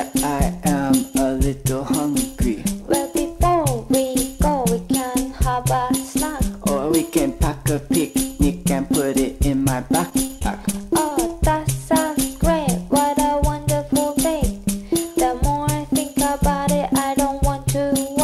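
From 10.09 to 11.31 s, repeated packet loss (robotic sound): ten short holes, none longer than 24 ms, each patched by extending the preceding sound. Unlike a single dropout, it stutters choppily throughout.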